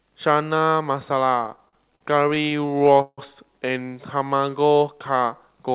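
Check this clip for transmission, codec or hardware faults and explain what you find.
Two transmission faults turn up here, both from the jitter buffer, on a call path that's band-limited at 4 kHz, which fits narrowband G.711-style coding.

Repeated stalls (stutter), 1.44 to 3.20 s: packets kept showing up late, so the buffer ran dry over and over, two dozen times or so across that span. Each time, the receiver stretched the last bit of sound to cover the hole, fading it on the longer waits, the longest being 160 ms. Nothing actually drops out, but roughly a quarter of that stretch is filler, so the speech drags and hiccups.

Jitter buffer slow-down, 4.18 to 4.60 s: here the buffer was building a reserve, repeating single pitch periods back to back to pad the stream. It added 58 ms, so that bit plays at about 88% speed with the pitch unchanged. You hear sounds drawn out a little longer than natural.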